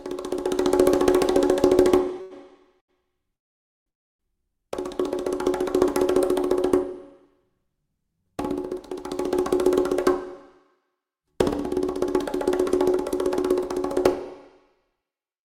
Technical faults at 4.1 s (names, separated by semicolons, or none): call audio freeze